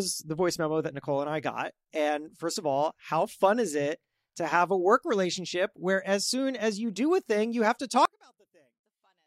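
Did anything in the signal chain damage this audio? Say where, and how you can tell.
Yes. Right after "thing you have to", from 8.05 s through to the end at 9.27 s, the voice collapses by about 38 dB and leaves only a faint residue. That's the signature of one channel inverted: with one side's polarity flipped, the centred speech cancels itself when the two channels are summed to mono, and only the small difference between them survives. The cause is likely a polarity swap in the analogue wiring, such as reversed conductors on one leg.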